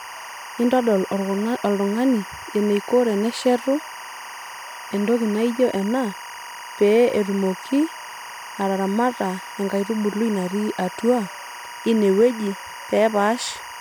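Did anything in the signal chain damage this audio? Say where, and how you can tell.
Yes, timecode bleed in the analogue wiring. A chirping warble near 1 and 2 kHz runs throughout, roughly 15 dB below the speech. Its rhythm fits 23.976 fps code leaking from a neighbouring cable.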